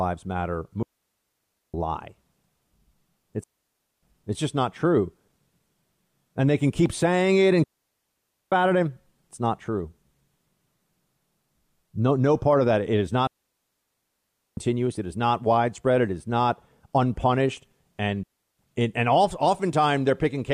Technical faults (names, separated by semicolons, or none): digital wireless dropout